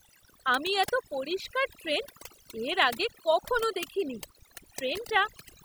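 Overdone noise removal runs through the whole recording. The noise reduction was set too aggressively, so frequency bands sitting near the estimated noise floor are pulled far down or gated off, taking quieter voice detail with them. Pauses fall to near silence flecked with twinkling artefacts.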